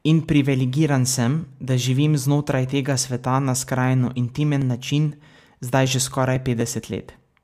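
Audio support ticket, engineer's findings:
Periodic USB or driver dropouts, 4.37–7.36 s, after "na skrajno": ticks every 0.249 s, each roughly 1 ms of speech skipped; USB bus or audio driver blocked at fixed intervals.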